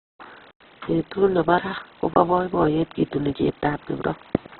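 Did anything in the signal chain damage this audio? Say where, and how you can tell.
Yes. The damage is at the codec stage and runs through the whole speech clip. It is likely Opus compression at a very low rate, consistent with about 8 kbps in its CELT mode. Band energies survive, but their fine detail is filled by folding or noise, so the speech turns rough and grainy rather than swirly, and bandwidth shrinks to narrowband. A spectrogram shows a flat ceiling near 4.2 kHz, with speckled texture instead of clean harmonics below it.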